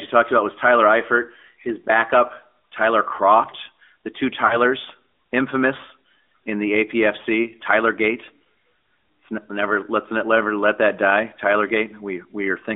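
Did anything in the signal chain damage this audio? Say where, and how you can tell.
Yes. At the codec stage, the whole speech clip has passed through the AMR narrowband mobile codec. The audio is confined to roughly 250 Hz to 3.5 kHz with nothing above, and the voice has a plainly audible buzzy, synthetic edge. The coder rebuilds speech from a vocal-tract model driven by a sparse pulse excitation, and the amount of that coarseness fits a mid-range AMR-NB mode around 10.2 kbps.

At the network stage, lost AMR speech frames are audible from 4.46 to 4.57 s as a brief smeared, warbling dip. When frames fail their checksum, the decoder has no new data and keeps reusing the last good pitch and vocal-tract settings while lowering the gain. That produces this held, sagging patch in place of real speech. The length of the gap points to two consecutive 20 ms frames being dropped.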